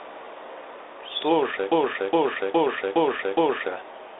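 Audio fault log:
1.72–3.68 s, broken-record loop: the stream or player likely stalled and kept resending the last fragment it held, so a 0.41 s slice of speech repeats exactly five times back to back, and the speech due in those two seconds never arrives.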